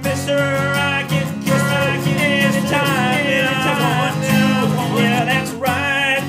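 A doubled audio track runs from 1.51 s to 5.19 s. A second full-band copy of the sound trails the original by about a second, at roughly the same loudness, so everything is heard twice in overlapping layers. The lagging copy carries no decay or room colouring, and it cuts in and drops out abruptly at those two points. The likely cause is the signal being captured again through a slower path and mixed back in.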